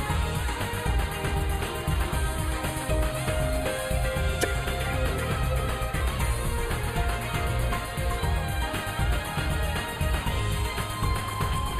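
From the start, channel delay (comb filtering) thins the top end: one channel runs roughly a tenth of a millisecond late, so the mono sum notches near 5 kHz and up, unlike broadband dulling. At 4.41 to 4.45 s, damaged data in a compressed stream gives a brief glitch as the decoder loses sync, distinct from a clean dropout.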